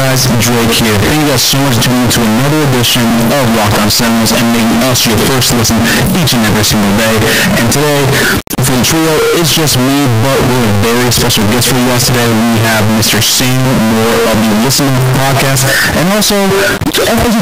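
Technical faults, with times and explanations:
Throughout, float read as integer: the speech comes out extremely loud and harsh, its waveform squared off at an almost fixed, high level regardless of how quiet the original was, and background noise sits at the same level as the talker, though pitch remains traceable. This likely comes from 32-bit float samples being read as 32-bit integers, so each sample's sign and exponent bits, not its true amplitude, set the output value.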